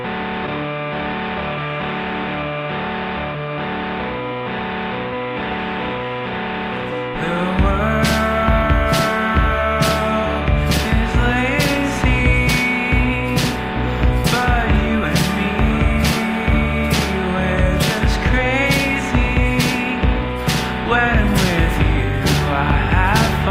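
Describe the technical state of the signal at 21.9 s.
The signal at 21.9 s is intact, with no audible fault at that moment.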